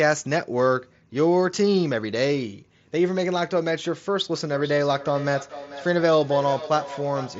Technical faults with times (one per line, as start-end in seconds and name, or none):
3.64 concealed Bluetooth headset packet loss
4.35-7.40 feedback echo between two devices